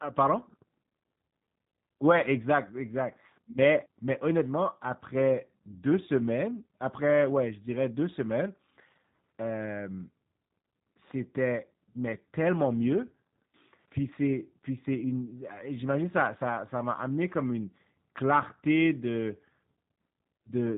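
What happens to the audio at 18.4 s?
At 18.4 s the speech carries G.729 codec damage, present across the whole clip: each 10 ms frame is resynthesised from a vocal-tract filter and a few pulses, leaving nothing above 3.8 kHz. Unlike simple band-limiting, the rebuilt voice sounds rough and synthetic.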